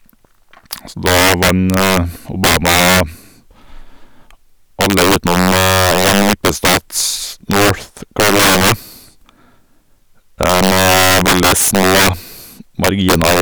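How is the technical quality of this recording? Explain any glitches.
Violent, sharp cracks burst out of the louder moments of the speech all the way through, far harsher than ordinary clipping. That is integer overflow: the signal was pushed roughly 12 dB too hot, and instead of being limited at the top of the integer range, each peak that went past it wrapped around to the opposite extreme. About one sample in twenty crosses that limit, so every loud syllable snaps across the full range and cracks.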